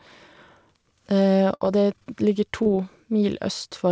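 Speech carried over a call path with nothing above 8 kHz, which fits G.722 wideband coding, has two packet-loss faults. A burst of packet loss runs from 1.55 to 1.63 s. The receiver holds the last sound for about 56 ms and fades it, then resumes roughly 60 ms further on. That stretch of the original is simply gone, so the speech jumps forward after a brief sustained smear. A short concealed packet loss follows at 2.62 to 2.68 s, where about 30 ms of audio failed to reach the decoder in time. The receiver covers the hole by extending the preceding sound for about 30 ms and blending back into the real signal. Because the gap is so short, it registers as a quick smear or wobble rather than a dropout, and the underlying 30 ms of speech is lost.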